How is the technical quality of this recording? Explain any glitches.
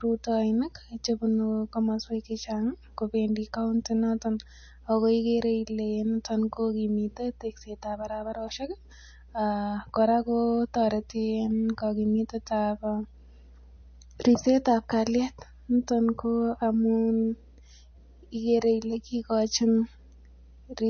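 Pretty rough: two problems run through the whole speech recording, start to finish.

First, mains hum: a steady 60 Hz drone from power-line pickup, probably a ground loop, sitting only about 25 dB under the speech.

Second, a plainly audible watery, swirly texture with nothing above 6.5 kHz. That's likely heavy MP3 compression, which fits a bitrate around 32 kbps.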